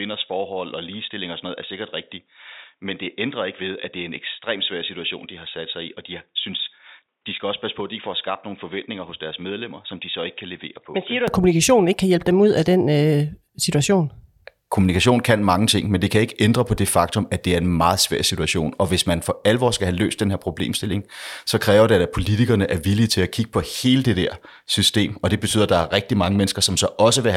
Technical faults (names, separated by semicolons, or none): input switched to a poorer device